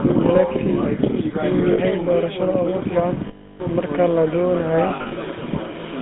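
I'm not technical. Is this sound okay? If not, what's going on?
No. The GSM full-rate codec runs throughout: it rebuilds the speech from a simplified model driven by regular pulses, giving a buzzy, gravelly roughness and cutting everything above about 3.6 kHz.

Lost GSM frames occur at 1.72 to 1.79 s, 3.28 to 3.61 s, and scattered from 4.88 to 5.13 s. Missing pieces were patched by repeating the last good sound, so a rough metallic ring is held.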